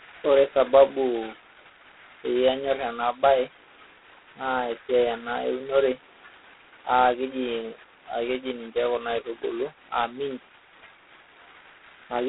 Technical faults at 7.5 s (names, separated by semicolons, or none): G.726 ADPCM